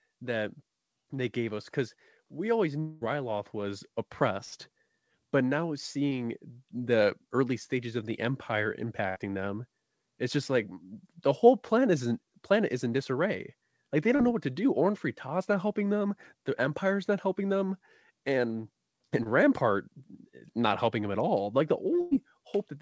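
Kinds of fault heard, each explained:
Automatic gain rising: From 0.19 s to about 10.5 s the speech and the background noise beneath it grow louder together, by about 8 dB in all. The control judged the input too quiet and raised its gain slowly. Because the rise is spread over roughly ten seconds and lifts the noise floor as much as the voice, it is not a speaker moving closer or talking louder. That would change the voice alone and more abruptly.
Long network dropout: From 2.80 s to 3.03 s the speech turns into a held, fading continuation of the last sound for about 210 ms, then picks up further on with about 220 ms of talk gone. This is likely a long dropout in delivery. It is set apart from a packet-loss burst by its greater length, over two tenths of a second. The fill never decays into real silence here.
Burst of packet loss: At 4.45 s, 9.09 s and 22.01 s, stretches of about 60 ms, 60 ms and 100 ms never arrived in time. 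The receiver carried the last sound on as a buzz or hiss that fades, for about 65 to 100 ms, then jumped ahead. These events are shorter than the dropout at 2.80 s but long enough to hear as a held, dimming fragment rather than a momentary blip.
Short concealed packet loss: At 6.10 s, 14.15 s and 19.23 s, only about 20 ms, 40 ms and 20 ms of audio were missing. The receiver patched each hole by briefly extending the preceding sound and blending back into the real signal. What is heard is a quick smear or wobble, and a short consonant can disappear. These events are too brief to produce the audible fading tail that marks the longer bursts.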